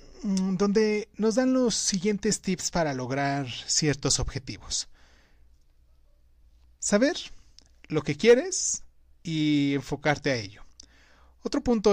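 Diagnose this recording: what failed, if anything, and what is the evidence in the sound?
Nothing failed, and there is no evidence of any fault in the sound.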